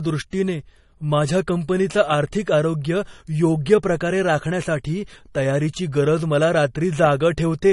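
From start to finish the speech sounds dull and smeared, with nothing above about 11.1 kHz, and two layers of coding grit at once: the artefacts of both codecs heard together. The likely cause is transcoding between lossy codecs. The character points to an MP3 stage at a low bitrate, around 48 kbit/s, re-encoded as AAC-LC at roughly 32 kbit/s, with the second encoder spending its bits on the first one's artefacts while keeping its band limit.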